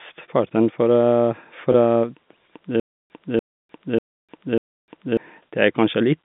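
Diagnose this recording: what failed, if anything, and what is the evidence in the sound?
From 2.80 s to 5.17 s the playback stalls in a stutter with silent gaps, most likely a player or stream buffer running dry. The same 292 ms fragment repeats four times, each followed by about 301 ms of digital silence, giving an even 593 ms cycle. Unlike packet-loss concealment, which smears or fades, these are exact repeats with true silence, and the speech that belonged in that span never arrives. The telephone-band G.711 character carries through.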